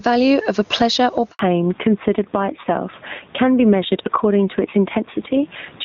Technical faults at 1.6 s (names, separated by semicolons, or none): gain pumping; fallback to narrowband